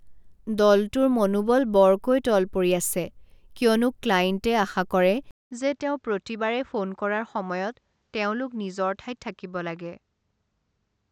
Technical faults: input switched to a poorer device

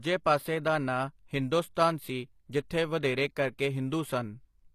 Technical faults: HE-AAC compression

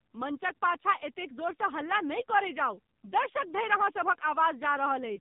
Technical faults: AMR narrowband mobile codec

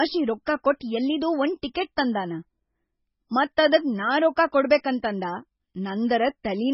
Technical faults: MP3 compression

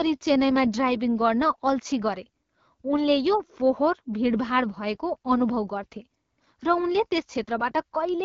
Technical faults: AMR wideband (HD Voice) codec

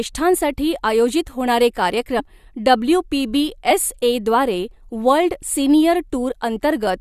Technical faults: compressed frames skipped

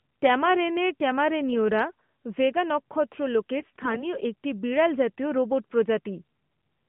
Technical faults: AMR bit errors

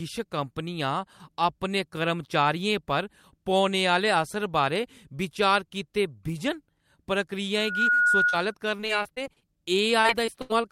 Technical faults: loudspeaker feedback squeal; short concealed packet loss; repeated packet loss (robotic sound); burst of packet loss

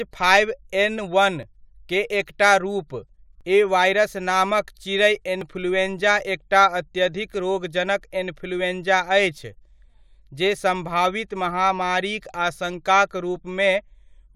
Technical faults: overlap between stream segments

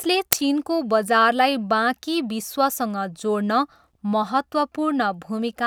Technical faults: uninitialised buffer

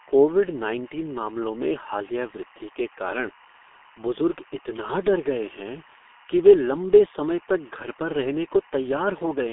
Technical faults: timecode bleed; G.723.1 codec

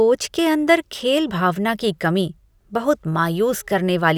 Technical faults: none

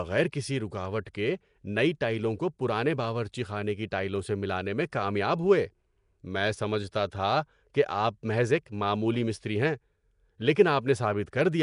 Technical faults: Nellymoser compression; pre-echo

